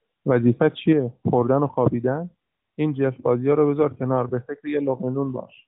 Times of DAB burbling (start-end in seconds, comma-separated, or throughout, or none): none